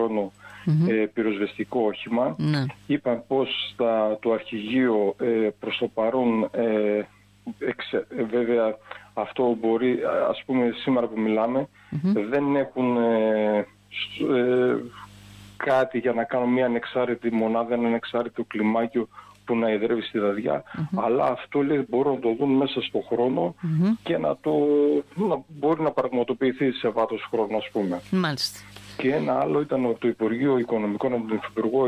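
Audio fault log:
No faults detected anywhere in this audio.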